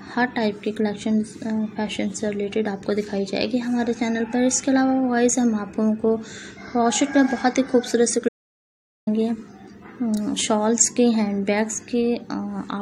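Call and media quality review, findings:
Audio dropout to silence, 8.29–9.07 s. Signal cuts mid-flow to silence for about 0.78 s, no room tone, then resumes abruptly. Likely capture-side input loss (device disconnect, link failure or stray mute) while the recorder kept writing silence. Content in the gap unrecoverable. Check input path and mute state at that time.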